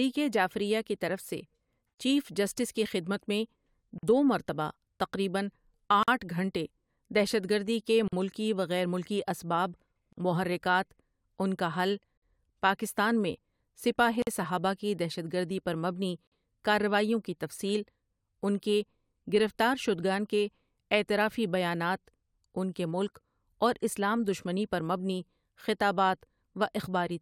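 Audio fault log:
1.94 s, 3.98 s, 6.03 s, 8.08 s, 10.13 s, 12.18 s, 14.22 s and 16.27 s: gap at a join of encoded pieces. Every 2.0 s the speech drops into silence, 43 ms at the first join (after "جعفریہ کی طرف سے") and 48 ms thereafter (after "دہشت گردی کے" and "محرکات ان کا حل"), then resumes where it stopped. Separately encoded 2-second pieces were joined with the encoder's start delay and last-frame padding left in. The waveform shows flat slots with smeared edges, and the spectrogram shows narrow blank vertical bands across all frequencies.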